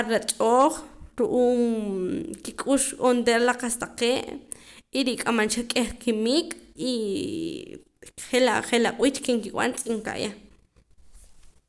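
Nothing in the recording stands out as a technical problem; the speech just runs along without any glitch, dropout or odd noise catching the ear.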